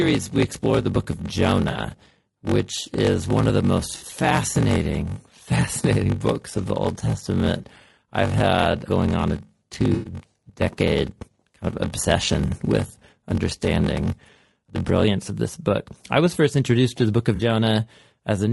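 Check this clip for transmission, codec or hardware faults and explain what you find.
Yes, there are three distinct problems in this speech clip, one running throughout and two tied to specific moments.

Low-delay AAC compression: The whole clip has a rough, grainy texture, with noise filling the gaps between harmonics and a thin, artificial-sounding top end. That's likely AAC-ELD working at a low rate, something like 32 kbps. Its short frames can't resolve pitch harmonics cleanly, so the damage is plainly audible.

Block size mismatch (padded): From the start to about 15.06 s, just before "of this book I", there's a steady buzz at about 46.9 Hz, and the speech drags at roughly 0.86 times normal speed. One stage is handing over short blocks that get zero-padded to fill the next stage's reads, which fits a 1024-sample read at 48 kHz. Each padded gap adds a tiny hole, producing the buzz and the slowdown.

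AAC frame loss with concealment: There are five smeared, noisy patches where the decoder patched over missing data by reusing the last good spectrum. They fall at 1.71 s (about 40 ms), 3.97 to 4.03 s (40 ms), 9.93 to 10.13 s (120 ms, the longest), 12.87 to 12.91 s (20 ms), and 17.35 to 17.41 s right after "to the book of" (40 ms).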